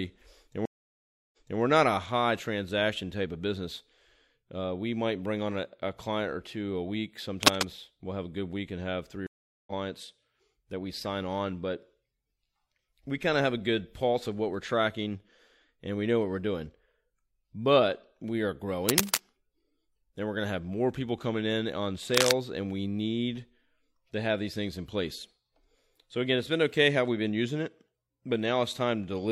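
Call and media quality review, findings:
Stream reconnect, 0.65–1.60 s: speech cuts to silence for about 0.67 s, then resumes about 0.28 s earlier than where it stopped, so material just before "we're not a high" repeats. Player lost the connection, reconnected, restarted the decoder mid-stream, and the server resent a burst. Second event, 9.27–9.72 s: about 0.40 s silence, resuming roughly 0.3 s later, so some speech is skipped. A plain dropout leaves no jump; here the timeline repeats or skips and the restart has a faded first frame.

Cable scratch noise, three bursts: 7.42–7.63 s between "or two a week" and "we'll have a good"; 18.88–19.21 s; 22.14–22.31 s between "people coming in on" and "and we need". Dense, uneven scratching about 5 dB above the speech, likely a worn cable, connector or control being moved and its contact resistance changing. Unlike packet loss or codec glitches, the speech continues underneath without gaps; the noise is added on top.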